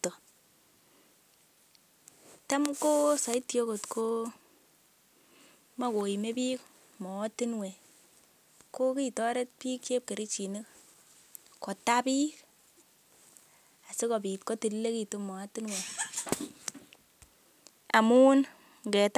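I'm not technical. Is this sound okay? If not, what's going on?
Yes, this one sounds fine, with nothing in the recording that stands out as a problem.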